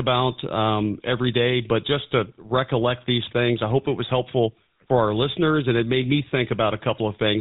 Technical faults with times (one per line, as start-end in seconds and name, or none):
0.00-7.41 GSM full-rate codec